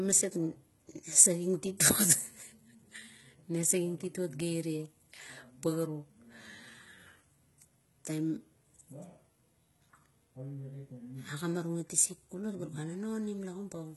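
From start to finish the speech carries the signature of heavy HE-AAC compression, likely at a very low bitrate in the region of 16 kbps. The upper band sounds synthesised rather than recorded: treble is regenerated from lower content, so it stays bright but does not belong to the voice, and its harmonics fail to match those below the crossover. Sibilants come out gritty and metallic, and nothing reaches above 11.8 kHz.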